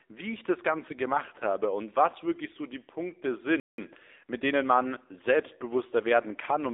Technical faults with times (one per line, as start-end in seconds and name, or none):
0.00-6.73 AMR narrowband mobile codec
3.60-3.78 playback stall
3.78-4.98 time-compressed catch-up